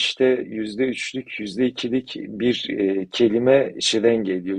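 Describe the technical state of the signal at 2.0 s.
At 2.0 s the speech signal is intact, with no dropout, distortion or other fault to be heard.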